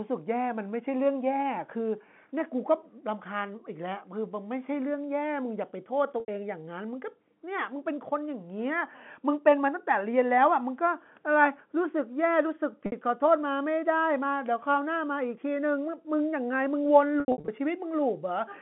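At 6.2 to 6.28 s and again at 12.86 to 12.92 s, packet loss with pitch repetition briefly freezes the speech into a held, buzzy tone lasting about 80 ms and 60 ms. The receiver is looping the last pitch period to cover missing audio, then fading it. At 17.2 to 17.48 s the losses come scattered, with runs up to 80 ms, so the tone stutters several times. Unlike plain dropouts, the gaps are bridged by held pitch that fades out rather than by abrupt silence, within the narrow 150 Hz to 3.4 kHz telephone band.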